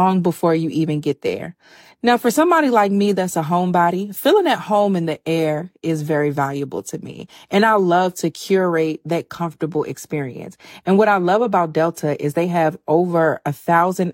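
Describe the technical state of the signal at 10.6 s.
At 10.6 s the speech signal is intact, with no fault present at that moment.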